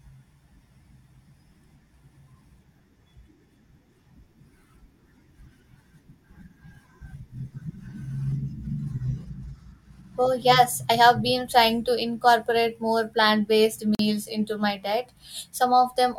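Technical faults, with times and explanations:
13.95 to 13.99 s, gap at a join of encoded pieces: right after "incorporate more plant based" the speech drops out for about 44 ms with smeared edges, then resumes on "into my diet". Two separately encoded pieces were joined untrimmed, leaving encoder start delay and final-frame padding as silence.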